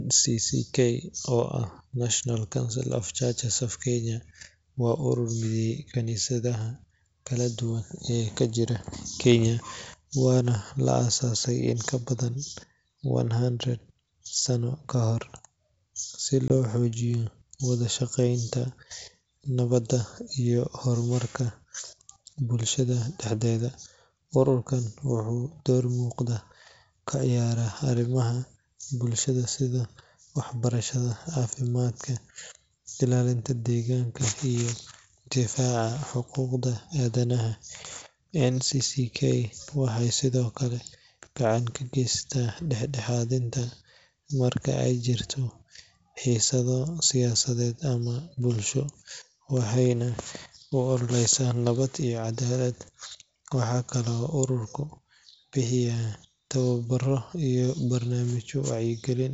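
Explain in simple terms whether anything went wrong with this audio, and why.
Around 16.48 to 16.53 seconds there is a brief hole in the speech, about 20 ms long, which fits a single lost packet. This is packet loss on an ADPCM call: the missing piece was simply filled with silence, so the gap has hard edges rather than a fade. The clear, wideband sound of the G.722 wideband telephone coding can be heard around it.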